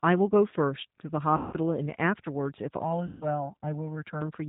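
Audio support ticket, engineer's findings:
G.729 codec, whole clip. Band-limited speech, nothing above 4 kHz. Rough, slightly synthetic texture, plainly audible throughout. Mechanism: 8 kbit/s CELP coding rebuilds speech from a vocal tract filter, pitch predictor and sparse pulses, discarding fine detail.

VoIP packet loss concealed by the speech codec, at 1.37–1.54 s and 3.07–3.25 s. Speech smears into a buzzy tone or coloured noise that fades. About 160 ms and 140 ms of audio lost. Decoder extrapolates from the last pitch and filter, reducing gain each frame.

Channel delay (comb filtering), 2.82–4.21 s. Hollow, phasey sound. One channel lags by around 1.5 ms before the mono sum. Shared content cancels at evenly spaced frequencies, with the first notch near 400 Hz. Probable component is the stereo-to-mono downmix path.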